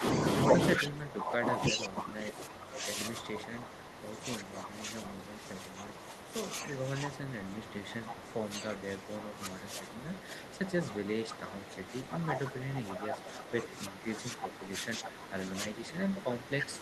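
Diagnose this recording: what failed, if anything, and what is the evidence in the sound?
Speech suppressed in double talk runs throughout, likely from the call processor's echo canceller. The voice ducks by up to roughly 15 dB.

Echo leak comes from call processing, likely an incompletely cancelled far-end loudspeaker. A discrete copy, delayed 330 ms, appears at 0.78–4.48, 6.19–6.33, 8.09–10.5 s and from 11.78 s. It is loudest first, unlike smeared reverb.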